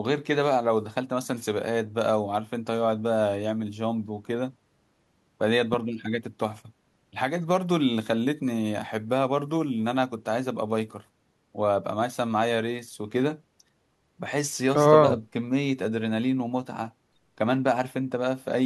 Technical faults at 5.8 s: loud pop

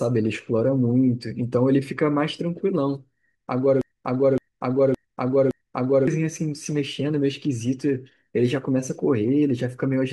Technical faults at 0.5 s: none

